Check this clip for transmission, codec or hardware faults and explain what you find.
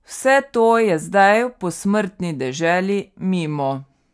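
Nothing in this speech recording points to a transmission, codec or hardware fault; the signal holds steady throughout with no audible disturbance.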